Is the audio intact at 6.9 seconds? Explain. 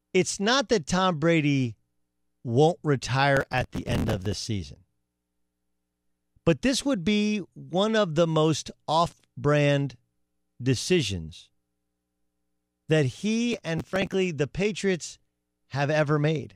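Yes, the audio is intact at 6.9 seconds, with no dropout, click, distortion or other fault at that point.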